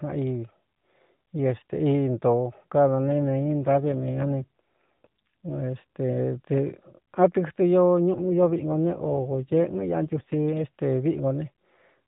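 Speech over narrowband AMR, nothing above 4 kHz, with two AMR rate drops from 3.04 to 5.62 s and 8.14 to 10.64 s. The voice turns buzzier and more synthetic, consistent with falling from 12.2 to 5.9 kbit/s. On a spectrogram the 4 kHz ceiling holds while harmonics smear, with no waveform gaps.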